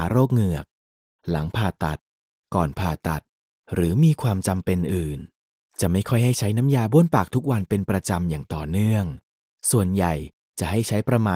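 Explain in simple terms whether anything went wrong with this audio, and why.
Nothing went wrong with this audio, because it has no faults.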